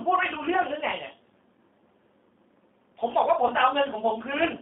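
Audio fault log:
Throughout: G.729 codec. The speech sits on a narrow phone-line band of roughly 200 Hz to 3.6 kHz and has a plainly rough, slightly synthetic edge. That comes from rebuilding each 10 ms frame at 8 kbit/s from a vocal tract filter, pitch guess and a handful of pulses.
3.48 to 3.53 s: VoIP packet loss concealed by the speech codec. About 20 ms of audio went missing, which points to a single lost packet. The decoder stretched the last pitch and filter into a brief fading fill, and the sound stays weak or distorted for a few frames after recovery.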